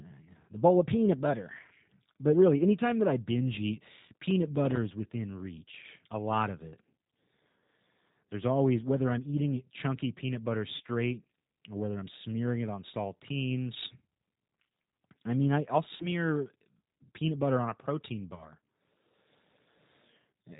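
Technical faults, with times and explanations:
Throughout: G.729 codec. The whole thing is cut off at 4 kHz and has that slightly rough, synthetic edge, which fits an 8 kbit/s G.729 stream. The speech is rebuilt from a vocal tract filter, a pitch predictor and a few pulses per frame, so the damage is plainly audible.
10.76–10.82 s, 15.96–16.07 s and 18.36–18.52 s: VoIP packet loss concealed by the speech codec. About 40 ms, 40 ms and 20 ms of audio went missing. The decoder stretched its last pitch and filter into a fading buzzy tone or coloured noise, and because each frame leans on the previous one, the sound stays weak for a bit after packets resume.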